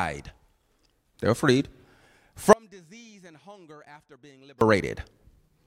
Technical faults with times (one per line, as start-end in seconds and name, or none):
2.53-4.61 audio dropout to a faint residue